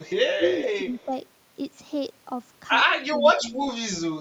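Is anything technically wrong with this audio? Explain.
Yes, there are two echo-control problems in this speech.

Echo leak shows up at 0.00–0.13 s, 0.40–0.70 s and 0.92–1.05 s: a copy of the speech trailing about 175 ms behind. It's faint at the edges and fairly prominent in the middle stretch. The far end was likely on a loudspeaker, and its canceller let some pickup back through.

Speech suppressed in double talk hits at 0.34–0.43 s, 0.76–0.88 s, 1.05–1.11 s, 3.10–3.18 s and 3.37–3.58 s. The speech briefly ducks by a few dB up to roughly 15 dB, likely because the canceller mistook the talker for echo while both sides overlapped.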